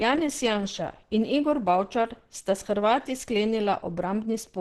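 From start to finish the speech sounds muffled and hoarse, with a rough, grainy texture and nothing audible above 12 kHz. This is heavy damage of the kind produced by Opus compression, likely running in its hybrid speech mode, where the lower band is coded for speech and the upper band is only sketched in. The cut-off and the amount of roughness fit a bitrate of around 12 kbps.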